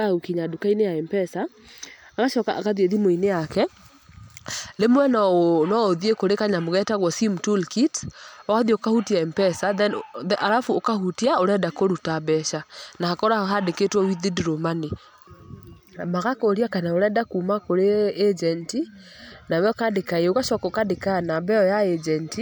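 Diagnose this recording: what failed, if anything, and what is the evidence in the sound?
Nothing in the signal chain failed: the speech runs continuously, with no dropouts, discontinuities, level jumps or distortion at any stage from capture through playback.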